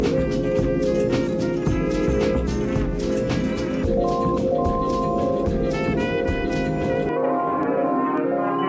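Music, with nothing technically wrong anywhere in the clip. No problem shows up at any point that would need a time or a cause.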